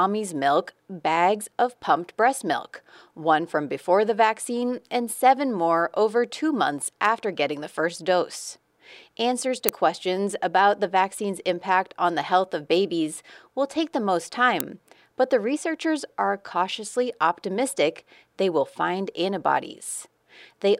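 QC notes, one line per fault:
9.69 s, uninitialised buffer: a sharp crack between "first dose answers to" and "questions about the vaccine's". Leftover memory played as audio, about 1.33 ms, fitting a 64-sample block.
14.60 s, uninitialised buffer: a shorter crack between "will take the most" and "but the researchers are". Stale memory was read as samples for about 0.67 ms, fitting a 32-sample block.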